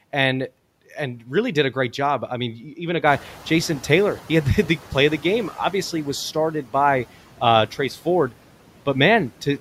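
Noise suppressor artifacts run through the whole recording. The suppressor estimates the steady background and pulls down every frequency band it judges to be noise, frame by frame, taking off about 12 dB. The background therefore dips in the gaps between phrases and swells back up beneath the speech.

Noise suppressor catching up appears from 3.06 s to 5.5 s, starting just after "I mean even a". Around 3 s the room noise jumps by about 16 dB, ending up about 19 dB below the speech. The suppressor's noise estimate was built on the quieter background and cannot follow the jump at once. At first the louder noise comes through with only about 7 dB of reduction. Over the next 2.44 s the estimate adapts, and the background audibly sinks back down.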